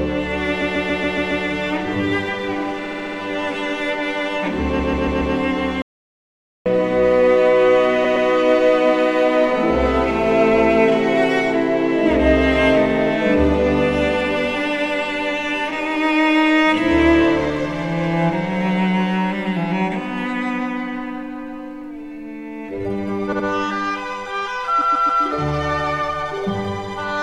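From 0.61 to 1.44 s the audio stutters as repeated frames replay a 139 ms block six extra times. The same fault returns at 2.84 to 3.18 s (a 70 ms block, five extra plays) and at 4.79 to 5.34 s (139 ms, four extra plays). The decoder was handed the same compressed run more than once, which fits chunks of a few frames being resent. On a waveform these show as identical shapes tiled side by side. On a spectrogram the same pattern repeats in columns.

From 5.82 to 6.66 s there is an audio dropout to silence lasting about 0.84 s. The sound cuts off abruptly and returns just as abruptly, with no room tone in between. Whatever occurred in that gap is lost. The likely cause is a momentary loss of input, where the recorder kept writing silence. It appears as a flat line on the waveform and a fully black band across all frequencies on the spectrogram.

The repeated frames resume at 8.04 to 8.27 s (a 116 ms block, two extra plays), 23.32 to 23.45 s (70 ms, two) and 24.80 to 25.22 s (139 ms, three). 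These show the same tiled waveform shapes.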